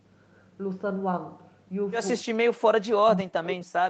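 From 2.25 s to the end, the speech drops sharply and breaks up, at its deepest around 40 dB down. This is likely speech suppressed in double talk. The echo canceller mistook the talker for echo while both sides spoke and turned it down.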